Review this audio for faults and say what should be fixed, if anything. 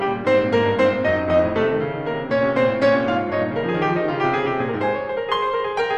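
Hard clipping from 0.54 to 0.84 s: this music drives about 2 dB past what the signal path can carry, so the waveform peaks are sliced flat. Those squared-off tops add high harmonics, heard as a brief crackle on the loudest moments. To prevent it, lower the gain before conversion by a few decibels or place a limiter ahead of the stage that overloads.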